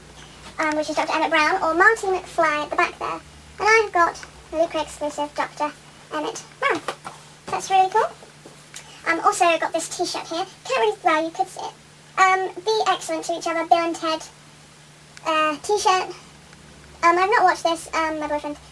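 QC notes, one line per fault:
Throughout, wrong sample rate: audio runs 1.5 times fast and about 7 semitones high, which fits 16 kHz material played back at 24 kHz unconverted.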